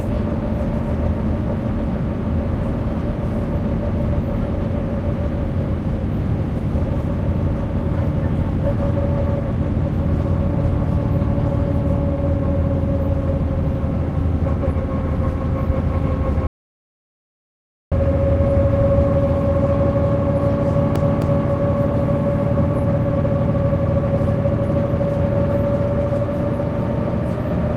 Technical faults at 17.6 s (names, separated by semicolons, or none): audio dropout to silence